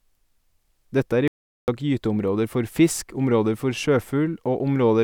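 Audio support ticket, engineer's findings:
Audio dropout to silence, 1.28 to 1.68 s: speech cuts to silence for about 0.4 s, no room tone. Likely input link or device dropped while the recorder kept writing.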